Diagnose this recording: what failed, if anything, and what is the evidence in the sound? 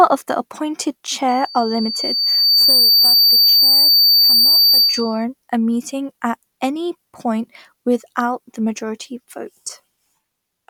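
What failed is the acoustic loop between the loudspeaker and the microphone, giving a classic loudspeaker feedback squeal. From 1.28 s a single tone near 4.6 kHz creeps in under the speech, swells over roughly a second and a half, and sits around 10 dB above the voice until it cuts out at 5.25 s. The mic was hearing its own speaker, and at 4.6 kHz the loop gain went past one, so that frequency fed itself and grew.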